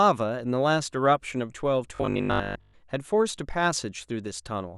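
Speech clip with robotic sound from repeated short buffers between 1.96 and 2.76 s: the voice turns into a stiff, metallic buzz fixed at 50 Hz. It's likely starved playback looping the last 20 ms or so, with most of that stretch repeated and the real audio skipped.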